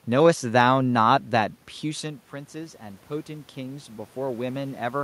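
From 1.81 s to the end of the clip, the automatic gain control is rising. The input level fell by about 15 dB when the talker moved away from the microphone around 2 s, and the gain control read this as too quiet a signal and kept raising its gain over the following seconds. The voice and the room noise swell together, so the background noise climbs along with the speech.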